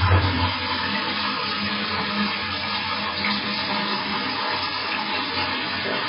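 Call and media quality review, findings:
Watery, swirling texture throughout; hard treble cut, nothing above 5.3 kHz. Likely MP3 compression, heavy, consistent with about 16 kbps: weak bands zeroed frame by frame, flickering. Unlike a plain low-pass, the remaining band churns and attacks smear.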